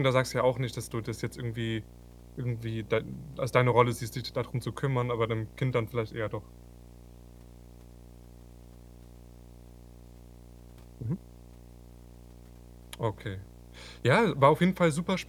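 Interference from a screen or video cable is leaking into the audio path for the whole of the recording, producing video or display buzz. The picture's field rate couples in at 60 Hz, so a steady buzz at that frequency sits under the speech, with a layer of gritty hash riding above it. The buzz runs roughly 20 dB below the speech.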